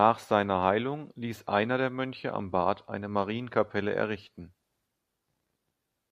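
Speech recording with no audible technical faults.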